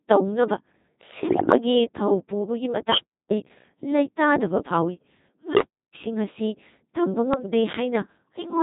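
The whole clip has that robotic, buzzy sound of the Codec 2 vocoder, pretty heavily degraded, which fits a 2.4 kbit/s setting. Only pitch, voicing, energy and a coarse spectral envelope get through, and the decoder rebuilds the speech from sine waves, so the real waveform is gone.

From 1.30 to 1.58 s you hear bit errors on digital voice radio. The speech suddenly lurches in pitch, level and tone colour and turns into warbling gibberish. At roughly a few percent error rate, each flipped bit derails a whole frame's parameters.

At 2.90 s an unstable filter kicks in. A tone around 3 kHz swells over about 71 ms into a loud squeal, clips, then drops into silence for about 0.34 s until 3.31 s. The recursive filter blew up and overflowed before resetting. At 5.55 s the same thing happens with a lower tone around 400 Hz, building over about 57 ms, followed by the same 0.34 s gap that ends at 5.95 s.

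The bit errors hit again briefly from 7.34 to 7.52 s, with the same garbled, bleepy pitch jumps.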